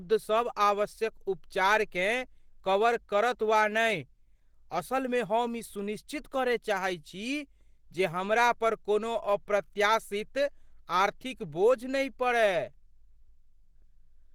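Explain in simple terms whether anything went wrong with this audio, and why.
Opus compression, throughout the clip: the speech sounds hoarse and grainy, likely because the encoder ran short of data and filled in missing detail with rough approximations.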